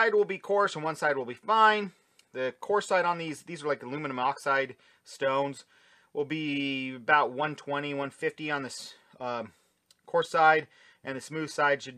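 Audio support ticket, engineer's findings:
Nothing stood out on listening; no findings to log against this clip.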